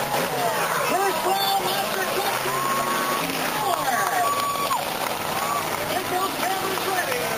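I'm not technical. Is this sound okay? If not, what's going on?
No, not quite. Around 3.21 to 3.32 s there's a skip ahead: roughly 0.7 seconds of sound got dropped, so playback jumps forward with almost no gap. Then from 3.79 to 5.09 s comes a jitter buffer speed-up, where the receiver trims tiny slivers to catch up. It plays about 4% faster at the same pitch.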